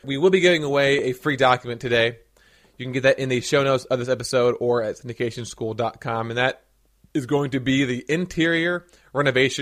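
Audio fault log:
No faults heard.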